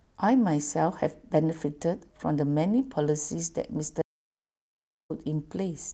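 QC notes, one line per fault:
0.03–0.15 s, comfort noise in place of the background: for about 120 ms the room tone becomes a smooth, featureless hiss roughly 4 dB quieter, likely synthetic fill from discontinuous transmission such as Opus DTX. On a spectrogram the textured background turns into an even, blurred wash.
4.02–5.10 s, audio dropout to silence: the speech cuts off abruptly and 1.08 s of total silence follows, with no room tone at all, likely from lost input while recording continued. The waveform is a flat line and the spectrogram a blank band.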